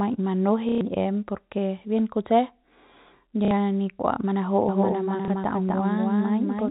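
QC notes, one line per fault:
0.69–0.81 s, 3.45–3.51 s and 5.25–5.28 s, packet loss with last packet repeated: packets were dropped for 120, 60 and 30 ms, and the receiver replayed the last one to fill each gap. The longer gaps buzz near 33 Hz, which fits 30 ms packets.
4.69 s to the end, doubled audio track: the same audio enters the mix a second time, most likely captured again through a slower path, running around 300 ms behind and about 5 dB quieter. It starts abruptly and gives a dry, full-band echo with no room decay, under the narrow 4 kHz-limited telephone band of the G.711 coding.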